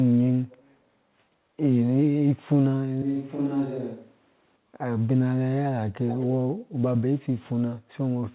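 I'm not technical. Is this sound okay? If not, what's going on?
No. There are two kinds of problem.

Echo leak: around 0.5 to 0.61 s, and again more clearly from 6.07 to 6.26 s, a delayed copy of the speech trails it by about 0.22 s. This is likely the far side's loudspeaker being picked up by its microphone and not fully cancelled.

Switch to a distant microphone: from 3.02 to 4.56 s the speech suddenly turns hollow and roomy, a bit quieter, with more background noise, then snaps back. This is likely the close microphone dropping out and a farther one filling in. Throughout, the phone-style call line removes everything above 4 kHz.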